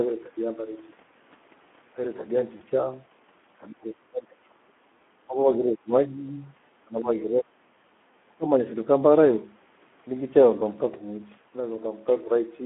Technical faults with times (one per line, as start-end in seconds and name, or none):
0.00-12.65 Speex codec
2.57-2.64 VoIP packet loss concealed by the speech codec
3.68-4.59 speech suppressed in double talk
5.27-6.23 speech suppressed in double talk
6.84-7.60 speech suppressed in double talk
8.27-8.89 speech suppressed in double talk